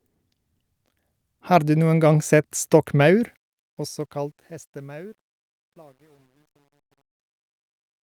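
Speech with a fade-out that begins around 3 s and runs to the end at 8.03 s, and from 3.21 s that fade carries truncation distortion. The gain stage drops low-order bits without dither, so as the level falls the waveform collapses onto a few coarse steps, which fits a 10-bit word length. The tail turns gritty, and it is worst from 4.59 s to 8.03 s.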